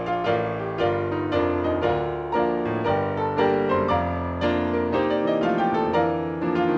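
No technical faults are audible anywhere here.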